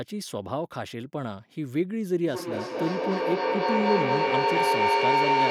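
From 2.27 s to the end there's a feedback howl: the mic-to-speaker loop is gaining level each trip, so a tone around 1 kHz swells to about 5 dB above the speech, pulsing roughly every fifth of a second.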